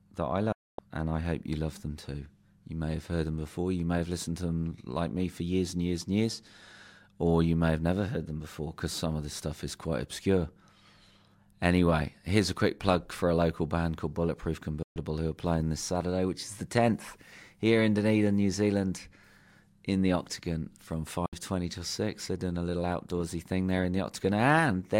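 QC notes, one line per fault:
0.52–0.79 s, 14.83–14.96 s, 21.26–21.33 s, digital broadcast dropout: the audio snaps to silence within about 3 ms for 256, 128 and 64 ms. The first hole falls after "that I" and resumes at "and I hope you", the second ends before "who are playing this". Each time the receiver lost or rejected frames (the gap lengths fit whole frames of roughly 32 ms), muted until good frames arrived, and what was sent in between is gone.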